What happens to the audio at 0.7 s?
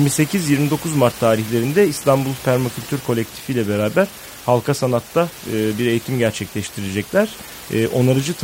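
Nothing goes wrong at 0.7 s; the speech comes through intact, with only the room's own background noise sitting about 17 dB beneath it.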